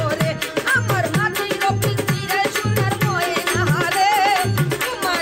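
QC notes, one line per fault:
No faults heard.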